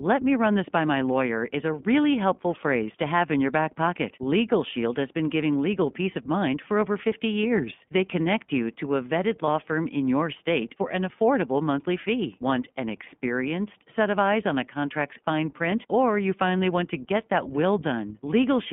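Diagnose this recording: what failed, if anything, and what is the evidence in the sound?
Codec stage: the iLBC codec is active throughout. The audio stays within 200 Hz to 3.5 kHz, and the speech is audibly rough and synthetic, which fits its 15.2 kbps mode. A plain telephone filter would narrow the band in the same way but stay smooth.

Network stage: there are lost iLBC frames between 9.46 and 9.48 s, between "you to a vetted" and "firm in your state". A brief buzzy held vowel of about 20 ms, which fits one lost frame, repeats the last pitch cycle. The speech recovers immediately, unlike the smeared recovery of predictive codecs.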